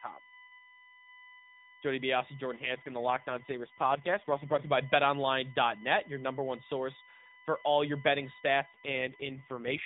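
A speech clip carried over a narrowband mobile call, with nothing above 4 kHz. Current drawn by a USB bus in 1 ms frames is leaking into the audio path through the power or ground, producing a steady USB whine throughout. It has a fixed 1 kHz fundamental, is loudest at its 2 kHz harmonic, and sits roughly 20 dB below the speech. Twice, an AMR rate drop occurs, where the network pushes the mobile codec down to a lower bitrate, sounding like a fall from 12.2 to about 4.75 kbps. The voice turns rougher, buzzier and more synthetic from 2.56 to 4.73 s and again from 8.72 s to the end, with no gap and no loss of bandwidth.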